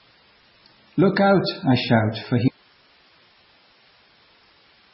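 Heavy compression, likely from a low-bitrate MP3 encode around 16 kbps, has removed everything above 5.5 kHz and left the speech dull, watery and swirly throughout. From 2.48 s, right after "out I shout for", an audio dropout to a faint residue, likely a lost input with the path still live, cuts the sound abruptly to hiss roughly 35 dB down until the end.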